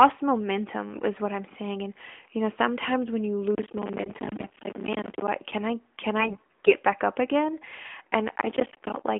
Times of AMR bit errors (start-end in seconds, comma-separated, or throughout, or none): 0.89-1.02, 4.00-4.51, 6.20-6.73